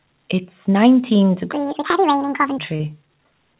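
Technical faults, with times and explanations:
1.53 to 2.58 s, section at the wrong speed: this stretch of speech runs 1.75 times too fast, with pitch rising by close to ten semitones along with the tempo, so the voice turns high and hurried. The likely cause is playback or editing against the wrong clock.
2.76 to 2.82 s, short concealed packet loss: about 40 ms of the call arrived too late. The receiver covered roughly 32 ms of it by extending the preceding sound before blending back into real audio, which leaves a brief smear at this point.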